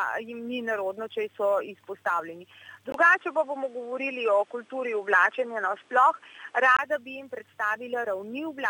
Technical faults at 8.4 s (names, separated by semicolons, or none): none